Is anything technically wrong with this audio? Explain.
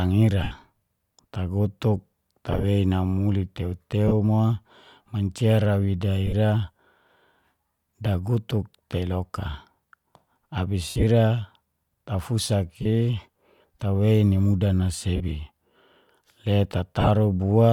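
Yes. There are dropouts from lost LE Audio frames at 0.43, 2.52, 4.08, 6.27 (just after "ra wida"), 10.89, 12.82, 15.16 and 17.01 s. Each gap lasts roughly 40 to 100 ms. When frames go missing, the LC3 decoder fills in by repeating the last spectrum with scrambled signs, so the speech turns into a brief noisy smear. The longest one, near 10.9 s, has a run of about 70 ms and starts fading toward silence. The light codec compression underneath comes through as expected.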